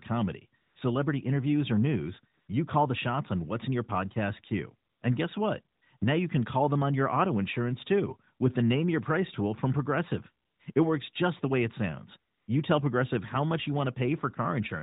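Between pauses in this speech, the phone's voice activity detection judged the talker silent and stopped sending speech frames, so the receiver substituted AMR comfort noise synthesised from a rough level and spectrum estimate. This happens at 0.62–0.76 s, at 2.34–2.48 s between "celebrity interviews or news" and "you call the shots", at 4.90–5.02 s, at 5.76–5.82 s after "guess what", at 5.98–6.02 s, at 10.46–10.60 s, at 10.74–10.76 s, and at 12.32–12.48 s after "the way it sounds". Each time, the real background gives way to a smooth, steady hiss lasting 20 to 160 ms before switching back, set against the band-limited, lightly coloured sound of the narrowband mobile codec.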